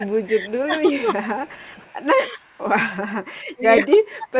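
From 0.0 to 0.06 s, 0.66 to 1.61 s, 2.35 to 2.47 s and 3.55 s to the end, the speech dips by about 10 to 30 dB. This is speech suppressed in double talk, likely an echo canceller turning the talker down along with loudspeaker echo. Among these, at 0.08 to 0.62 s, 1.35 to 2.05 s and 2.57 to 2.63 s, an echo leak brings back a separate copy of the voice, 285 ms late and about 30 to 40 dB down, likely residue the canceller missed. The suppression lowers the main voice, while the leak adds a second, delayed voice. The band stops at 4 kHz throughout, which fits a G.711 call path.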